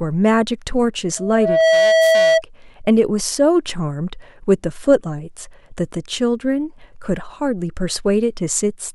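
From 1.17 to 2.42 s there's loudspeaker feedback squeal: the mic is catching its own loudspeaker, and at 650 Hz the loop gain tops one. That tone swells over about half a second into a steady squeal sitting roughly 5 dB above the speech.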